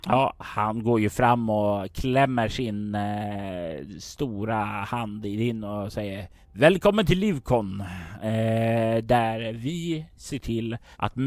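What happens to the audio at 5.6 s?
Nothing goes wrong at 5.6 s: the speech continues without any dropout, click, distortion or other fault at that point.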